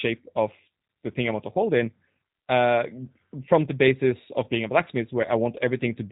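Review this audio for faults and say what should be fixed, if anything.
The speech passed through a G.729 codec throughout, rebuilding it from a vocal tract filter and sparse pulses at a rate that fits 8 kbit/s, so it sounds rough and synthetic with nothing above 3.8 kHz. Use a wideband codec or a higher-bitrate path for this audio.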